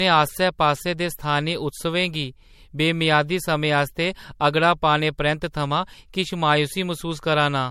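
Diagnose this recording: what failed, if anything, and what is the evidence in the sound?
Generation loss at the codec stage runs through the whole speech recording: swirling, hollow, smeared texture and blurred attacks, with nothing above 16.5 kHz. The damage exceeds what one MP3 pass at around 64 kbit/s would leave, so the likely cause is about three encodes, each requantising on a shifted frame grid.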